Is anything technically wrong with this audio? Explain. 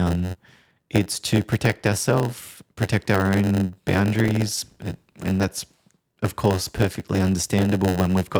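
Yes, two faults are audible.

Block size mismatch (padded), throughout: each block is shorter than the next stage expects and is topped up with zeros, giving a 91.9 Hz buzz and speech running at 0.919 speed with unchanged timbre.

Block of digital silence, at 4.28 s: about 1.43 ms of sound cuts out abruptly and returns without a fade, heard as a brief tick.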